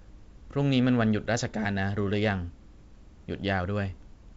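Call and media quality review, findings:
No faults found in this speech clip. The G.722 wideband path at 64 kbit/s carries the speech up to about 7 kHz, with at most a faint hiss in the upper band.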